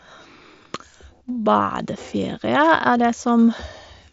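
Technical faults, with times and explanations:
No technical faults detected.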